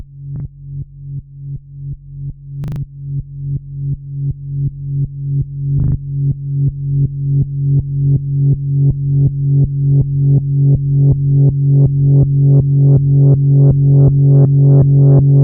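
At 0.36 s there's a repeated buffer. The player didn't get fresh audio in time, so it replayed the last chunk, about 40 ms long, twice more, which gives a quick stutter with a hard seam at each join. It happens again at 2.64 s and 5.8 s, each time with four extra plays, so those stutters run to about 0.16 s. Nothing seems to go missing, though. The sound just picks up where it left off.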